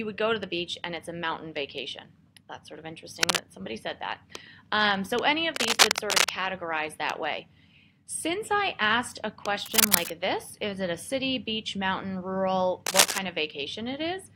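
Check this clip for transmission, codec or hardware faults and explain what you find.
One hardware fault appears, cable scratch noise, in four bursts: 3.23 to 3.39 s, 5.55 to 6.30 s, 9.63 to 10.10 s and 12.86 to 13.18 s. The likely cause is a worn cable, connector or control that carries a DC voltage being moved, so its contact resistance jumps about rapidly and injects dense, irregular noise. Each burst sits roughly 5 dB above the sound and is heard as a brief scratching or rustling laid over it.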